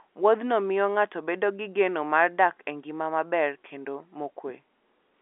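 Nothing stood out on listening to this telephone-band speech, which carries nothing above about 3.8 kHz as G.711 A-law coding at 64 kbps would leave it.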